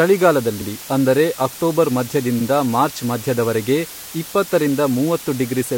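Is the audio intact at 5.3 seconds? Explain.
No. At 5.3 seconds, as throughout the whole clip, a steady, even hiss sits roughly 15 dB below the speech: low bit depth with dither, where 6-bit rounding error becomes white noise.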